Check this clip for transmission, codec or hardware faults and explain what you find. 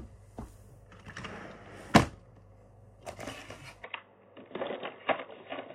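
There's one fault, and it sits at the tail end. From 3.84 s to the end, the sound abruptly goes dull and boxy, with nothing left above 3.8 kHz, a small jump in level and a faint new background noise well below the sound itself. There's no gap at the changeover. That points to an input switched to a poorer device, likely a narrower-band mic or a headset call profile taking over. The new device brings its own bandwidth limit, tone, gain and noise.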